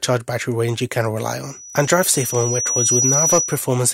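The audio has loudspeaker feedback squeal from 1.48 s to 3.76 s. A single tone near 5.9 kHz appears and swells over roughly a second and a half. It ends up a few decibels louder than the rest of the sound. The cause is a microphone hearing the loudspeaker it drives. At 5.9 kHz the loop gain went above one, so that frequency kept feeding itself. It fed itself until it stopped at 3.76 s.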